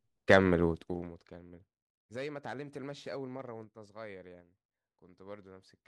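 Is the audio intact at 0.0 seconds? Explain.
Yes, at 0.0 s the speech is intact, with no fault at that moment.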